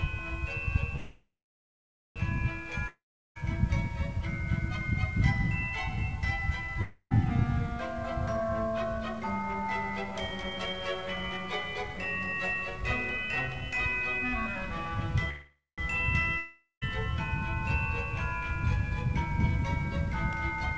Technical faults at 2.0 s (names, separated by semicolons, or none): call audio freeze